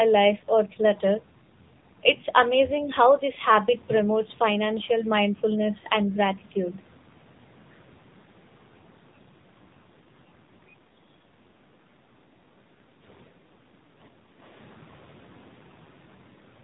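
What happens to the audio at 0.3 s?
At 0.3 s, as throughout the clip, the speech carries AMR narrowband mobile codec damage. Nothing above 3.8 kHz survives, and the vocal-tract model driven by sparse pulses gives a plainly buzzy, synthetic quality, which fits a low rate of about 7.4 kbps.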